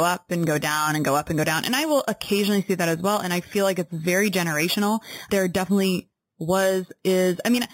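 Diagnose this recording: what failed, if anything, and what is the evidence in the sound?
A bright metallic fizz tracks the speech throughout, its lowest band between 4 and 8 kHz at about 14 dB down: imaging from sample-and-hold upsampling, fitting an unfiltered 8 kHz to 48 kHz rate conversion.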